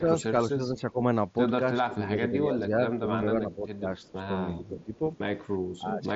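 Speech suppressed in double talk affects this speech recording at 0.0–1.01 s, 1.85–4.22 s, 4.58–5.02 s and 5.78–6.14 s. Within each stretch the voice sinks in patches by around 10 dB, and by about 15 dB in the last one. The likely cause is an echo canceller that, with both ends talking at once, could not tell the near talker from loudspeaker echo and turned the whole signal down.

An echo leak appears at 3.98–4.11 s and again at 4.65–5.18 s as a faint copy of the voice trailing 358 ms behind, about 35 dB below the speech. This is likely loudspeaker playback on the far side that its canceller failed to remove completely, so the residue was sent back.

The Bluetooth mSBC headset link caps the audio near 7.7 kHz.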